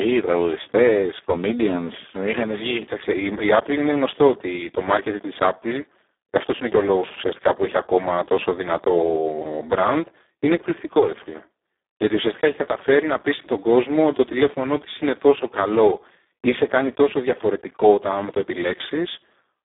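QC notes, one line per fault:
Throughout: Speex codec. The speech sounds hoarse, buzzy and near-robotic, confined to a 300 Hz to 3.6 kHz telephone band with nothing above 3.7 kHz. Plain band-limiting would keep voices clean; here too few bits for the excitation roughen every syllable, which fits a rate around 4 kbps.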